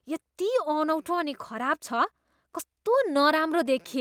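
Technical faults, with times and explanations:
Throughout: clock drift between sender and receiver, with the sender's clock running about 4 percent fast, so the receiver's buffer keeps overfilling and it must discard audio to keep up.
0.34 to 3.96 s: repeated timing corrections, as the receiver cuts short pieces of speech to stay in step, with the speech running about 4 percent fast.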